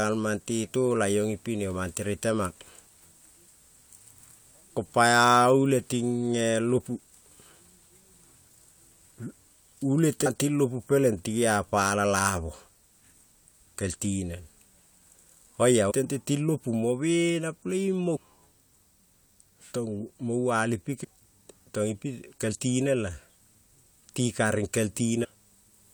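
Damaged data in a compressed stream hits this speech five times: bad bytes make the decoder misread a frame, lose sync and skip ahead to the next header it can find. Each leaves a short chirp or blip, at 10.25 s just before "ting lopu peleng ti", 15.90 to 15.92 s just before "tente ting lapu mo", 18.15 to 18.17 s, 21.03 to 21.05 s right after "mo val ipi", and 25.23 to 25.25 s.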